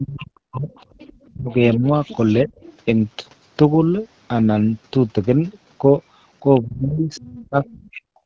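A speech recording with both call faults clustered at the start and end. Speech suppressed in double talk pulls the talker's own voice down from 0.0 to 0.72 s, 1.32 to 1.84 s, 2.44 to 2.5 s and 6.63 to 8.25 s, by as much as about 40 dB. The likely cause is an echo canceller ducking everything while both ends speak. Unlike packet loss, the voice drops in step with the far side rather than at random. The other side's voice leaking through sits around 25 dB below the talker from 0.73 to 2.73 s, at 6.55 to 6.6 s, and from 7.15 to 7.88 s, probably loudspeaker sound that the canceller failed to remove. It is a separate, distinct second voice, not a smeared copy of the talker as reverberation would be.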